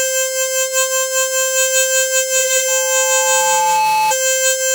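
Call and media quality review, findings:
Loudspeaker feedback squeal, 2.68 to 4.14 s. Single 866 Hz tone over the music, swelling for about a second until it is roughly as loud as the music. Probable component: mic-to-speaker acoustic path. Mechanism: loop gain above unity at 866 Hz, so that frequency keeps recirculating and grows until the loop is broken.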